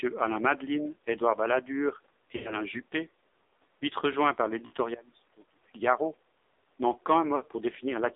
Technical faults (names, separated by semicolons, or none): AMR narrowband mobile codec; lost AMR speech frames; one channel inverted